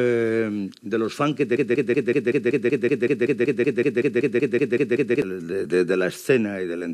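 A broken-record loop runs from 1.57 s to 5.22 s. A fragment of about 189 ms repeats exactly, back to back, 19 times. The audio that belonged in that span is gone. The likely cause is a stalled player, encoder or stream resending its last fragment.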